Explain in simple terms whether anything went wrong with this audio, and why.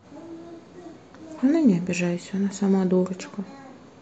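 The speech was likely squeezed too hard by MP2 compression, which dropped the upper frequencies, leaving it dull and gurgly, with a grainy roughness throughout.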